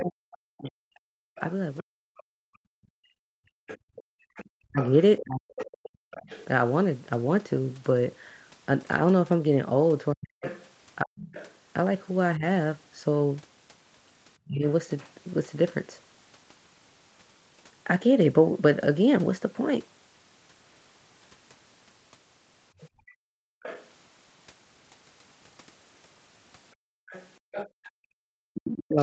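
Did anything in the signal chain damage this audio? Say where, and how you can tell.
Yes. The damage comes from the echo canceller in the call processing stage.

Other side's voice leaking through: a second, fainter voice sits under the talker from 0.0 to 6.45 s, 10.43 to 14.71 s, 22.8 to 23.89 s and 27.1 s to the end, roughly 15 to 20 dB down. This is likely loudspeaker playback that the canceller failed to fully subtract from the microphone.

Speech suppressed in double talk: the talker's level collapses in chunks, by roughly 40 dB at worst, between 0.01 and 6.0 s, 10.13 and 14.64 s, and from 28.25 s to the end. These dips coincide with the leaking voice, so the canceller likely attenuated both sides when they overlapped.

Background gated by the echo canceller: the room tone drops out abruptly by about 39 dB within 1.24 to 4.29 s, about 37 dB within 22.9 to 23.63 s, and about 38 dB within 26.75 to 27.97 s, then snaps back. 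The canceller clamped the microphone while the loudspeaker was active and released it afterwards.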